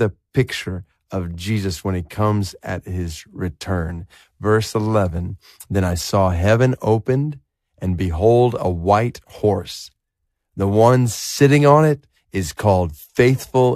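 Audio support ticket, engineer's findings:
Listened through the speech recording and nothing turned up worth flagging, so no action needed on this one.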